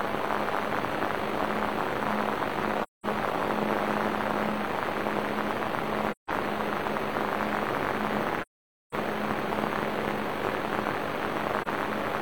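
The sound drops out four times, at 2.83–3.06, 6.11–6.30, 8.42–8.95 and 11.61–11.68 s. This is AAC frame loss with muting: the decoder zeroes the missing frames, and the overlapping windows fade out and back in, giving soft-edged holes, the longest about half a second.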